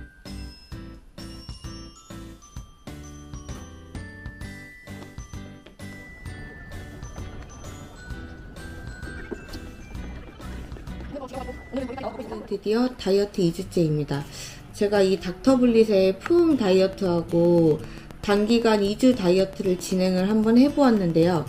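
From 16.26 s to 21.37 s, a train of clicks ticks steadily at about 7.7 per second, some forty near-identical pops rising roughly 5 dB above the sound. Likely interference or a faulty connection or power supply. Spectrograms show evenly spaced vertical broadband lines; waveforms, regular sharp spikes.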